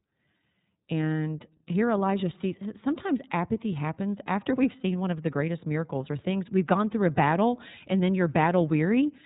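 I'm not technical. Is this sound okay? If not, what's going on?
No, not quite. The whole clip has gone through the iLBC codec, a phone-style voice compressor that handles the speech in 30 ms chunks and drops everything above about 3.8 kHz, so it sounds muffled, slightly rough and a bit robotic throughout.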